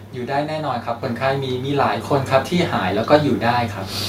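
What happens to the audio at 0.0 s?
Nothing goes wrong at 0.0 s; the audio is intact at that moment.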